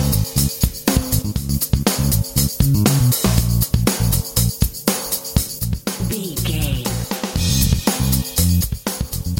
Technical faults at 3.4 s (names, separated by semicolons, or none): none